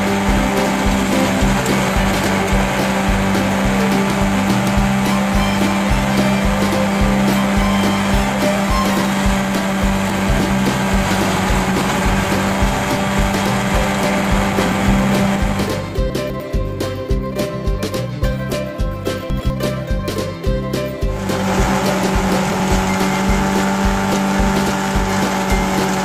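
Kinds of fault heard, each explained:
Chunks out of order: four brief jumbled moments at 10.1, 16.1, 19.3 and 22.3 s, lasting 0.2 to 0.4 s. A 100 ms slice of audio plays late, after the one to three slices that should follow it, so the sound briefly runs in the wrong sequence. Nothing goes missing, but each displaced slice leaves three abrupt joins.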